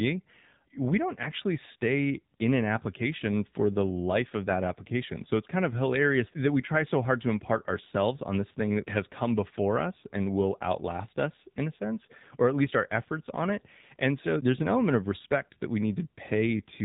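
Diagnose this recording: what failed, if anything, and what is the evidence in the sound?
The failure is at the codec stage: the speech has been through the AMR narrowband mobile codec for the whole clip. Nothing passes above 3.8 kHz, so a spectrogram shows a hard ceiling there. The plainly audible buzzy, synthetic texture fits a low AMR-NB mode of around 7.4 kbps.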